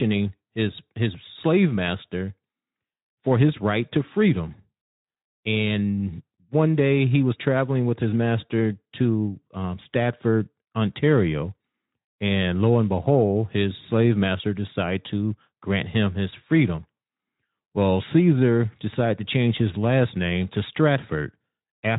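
Nothing here counts as a fault: it's speech coming through a Speex speech codec at 15 kbps, which leaves a light coding texture and a band that stops at about 3.8 kHz, and that's just how the codec sounds at that setting.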